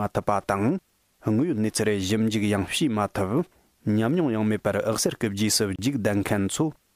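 At 5.76 to 5.79 s a gap at a join of encoded pieces opens: a gap of about 29 ms, consistent with separately encoded pieces about 6 s long being joined untrimmed. Unlike a dropout, nothing is lost; the sound resumes exactly where it stopped, with smeared edges.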